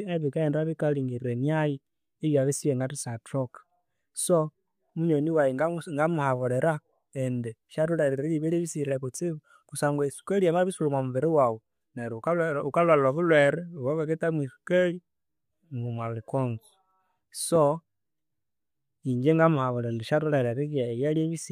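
A loud pop lands at 17.56 to 17.58 s in this speech recording: one sharp, brief crack that peaks around 10 dB above the level of the speech, which carries on underneath without a break. The likely cause is a sudden voltage step or spike entering the signal chain from a connector being disturbed, a switch, a static discharge or a driver glitch. The circuits after it shape that jolt into the short, hard-edged burst heard here.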